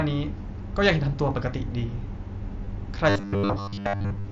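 A speech clip with two distinct disturbances. At 2.65 s there is a brief blip, a tiny sustained smear with a faint warble as normal sound resumes. This is concealed Bluetooth headset packet loss: about 15 ms of audio went missing on the link from headset to phone, which fits a couple of lost frames, and the receiver bridged the gap by repeating the closest-matching stretch of recent waveform. From 3.10 s to the end at 4.32 s the sound turns rigid and metallic, a fixed buzz at 100 Hz that only loosely tracks the speech underneath. This is robotic sound from repeated short buffers, most likely caused by audio arriving too slowly, so the software keeps replaying the last roughly 10 ms slice, which sets the 100 Hz pitch, while most of the real audio is dropped. The mSBC wideband headset codec carrying the call adds only light graininess on louder passages.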